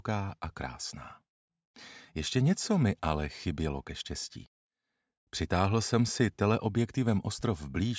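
Nothing technically wrong can be heard anywhere in the clip. No fault turns up at any point in the audio.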